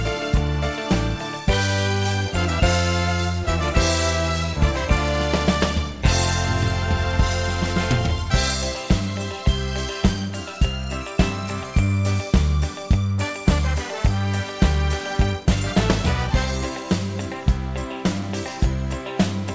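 No audible faults present.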